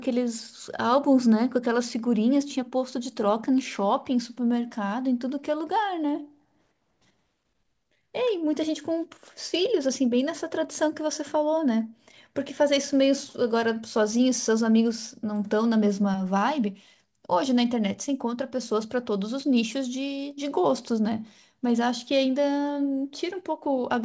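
No technical faults are audible.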